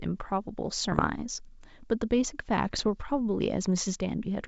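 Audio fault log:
0.92–1.05 s and 2.65–2.89 s, bit errors on an ADPCM link: two short stretches of clicks and rough, gritty bursts with momentary jumps in level, the second lasting about 0.23 s. An error rate of a few tenths of a percent corrupts the decoder's step size and predictor, so each flipped bit keeps distorting for several milliseconds. The waveform shows sharp spikes and uneven amplitude; the spectrogram shows brief broadband vertical streaks over the clean G.722 wideband band.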